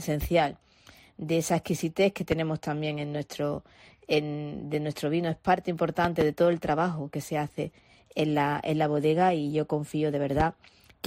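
Loud pops occur at 2.32 to 2.35 s, about 10 dB above the sound; at 6.05 to 6.24 s as two pops; and at 10.40 to 10.43 s, both about 15 dB up. Each is a sharp thump over continuing audio, likely from a voltage spike.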